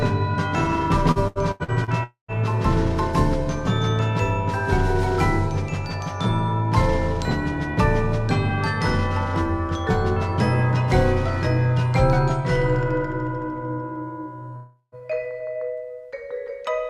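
Between 1.11 and 1.90 s the audio turns choppy and robotic: repeated packet loss leaves five holes, the longest 81 ms, each patched by extending the previous sound, so about 35% of that stretch (280 ms in total) is concealment. A spectrogram shows smeared, repeating harmonic bands broken by short notches. Two gaps follow at 2.03 to 2.31 s and 14.56 to 14.95 s, most likely long network dropouts. Each one starts with a fading buzzy continuation of the last sound, lasting 248 ms and then 356 ms. The waveform then goes flat, for 120 ms in the first case and 40 ms in the second, before the audio resumes with roughly 240 ms and 360 ms of material missing.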